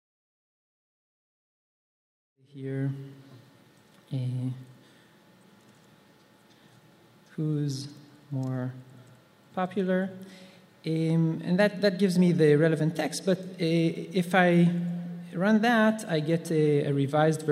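No technical faults are audible.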